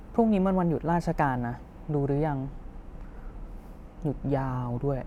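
From 1.83 s to the end of the speech, the sound turns slightly dull, consistent with channel delay (comb filtering). One channel lags the other by only about two hundredths of a millisecond, which fits a one-sample offset, and when the two are summed to mono the shared content cancels. With so short a delay the first notch sits near 20 kHz, so the loss falls at the very top of the band and takes away some air and sparkle.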